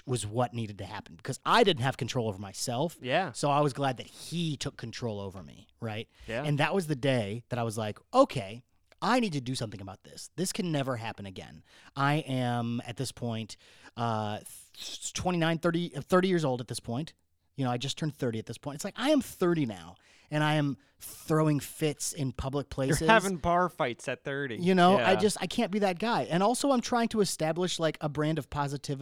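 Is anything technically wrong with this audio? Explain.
No, nothing technically wrong can be heard in this speech recording. There is no fault to point to at any moment in it.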